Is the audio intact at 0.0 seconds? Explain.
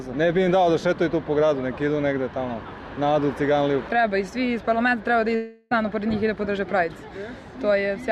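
Yes, the audio is intact at 0.0 seconds, with no dropout, click, distortion or other fault at that moment.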